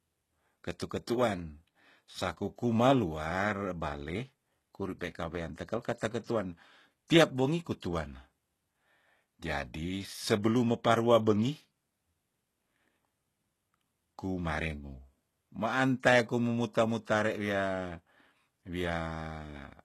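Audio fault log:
throughout, HE-AAC compression: the upper spectrum was likely regenerated by spectral band replication at a low bitrate, which fits roughly 16 kbps. S sounds in the speech turn gritty and lispy, harmonics misalign across the crossover, the damage is plainly audible, and nothing remains above 12.3 kHz.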